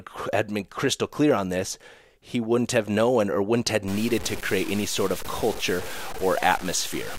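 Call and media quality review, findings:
Low bit depth without dither from 3.88 s to end, after "known or wouldn't have". Gritty, signal-following grain about 15 dB below speech. Likely undithered truncation, fits 6 bits.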